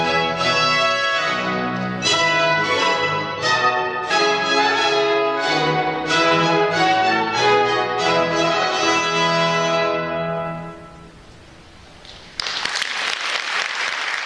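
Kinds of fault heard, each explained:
No technical faults can be heard anywhere in this recording.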